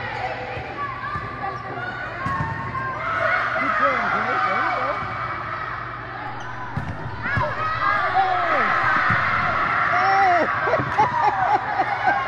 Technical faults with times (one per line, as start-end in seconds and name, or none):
6.27-9.64 DC step